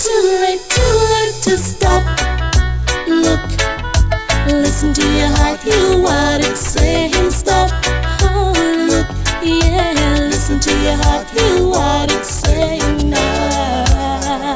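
No technical faults can be heard anywhere in this recording; the signal runs steadily throughout.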